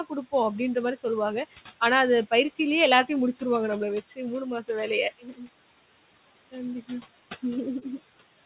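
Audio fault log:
throughout: noise suppressor artifacts. Steady room noise is pulled down about 18 dB frame by frame, so it dips between phrases and swells under speech.
3.33–3.43 s, 4.08–4.19 s, 4.45–4.69 s, 5.19–5.49 s: speech cut by the noise suppressor. Quiet speech was mistaken for noise and dropped about 12 to 18 dB, so those stretches sound swallowed and faint.
7.79–7.85 s: short concealed packet loss. About 30 ms never arrived in time, and the receiver patched the gap by extending the previous sound before blending back, giving a brief smear.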